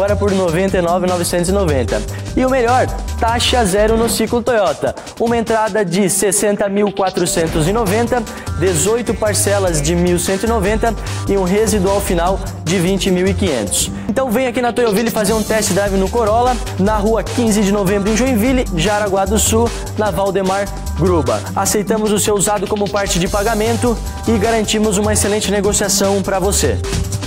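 No technical faults can be heard in this audio: the signal carries no dropouts, clipping, glitches or other processing problems at any point.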